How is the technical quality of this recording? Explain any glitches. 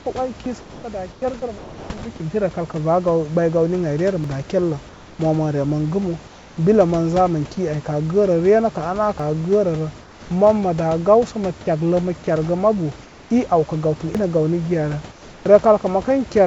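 The recording has three kinds of glitch on top of a G.722 call path, whose band stops at 8 kHz and fits a 64 kbps setting. Room noise sits about 23 dB below the speech.

From 0.44 to 2.02 s, up to "bi kimti", the sound is chopped by the voice detector. The sender's detector likely toggled transmission on and off, so about 720 ms in total was swapped for fill noise, making the stretch choppy.

At 4.24 s (just before "daa kerlə"), 9.20 s and 14.15 s, there is audio missing between chunks. Processing in 5-second blocks likely drops roughly a twentieth of a second at each boundary, heard as a skip.

Comfort noise replaces the background at 4.89–5.19 s, 6.27–6.57 s, 10.00–10.30 s, 13.02–13.30 s (after "kergə mabu") and 15.12–15.46 s. During pauses the sender likely stopped transmitting, and the receiver synthesised noise. The real background gives way to a flat hiss about 2 to 4 dB quieter.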